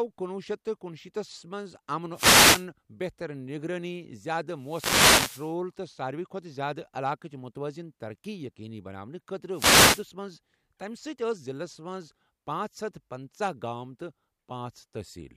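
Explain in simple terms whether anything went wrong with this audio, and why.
Yes, three wireless microphone noise hits occur, at 2.13–2.66 s (just before "بہتر نگرٲنی"), 4.57–5.57 s and 9.51–10.08 s. The radio signal briefly fades, so static swishes over the speech. Unlike a digital dropout, the sound fills with noise rather than going silent.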